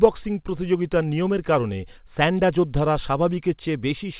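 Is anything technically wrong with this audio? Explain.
No, nothing in this speech clip points to a technical fault. It has come through a call path, and the lack of any content above 4 kHz fits the narrowband G.711 mu-law coding used on standard phone-quality links.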